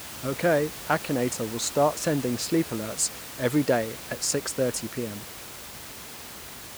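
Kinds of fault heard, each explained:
Nothing in this recording points to a technical fault.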